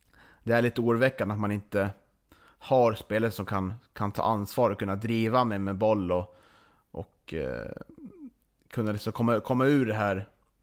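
No technical faults can be heard anywhere in the speech.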